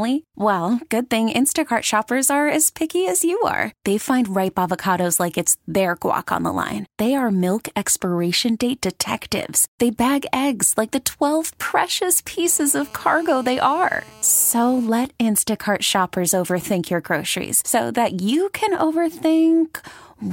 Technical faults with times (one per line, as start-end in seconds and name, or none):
12.46-14.87 GSM phone buzz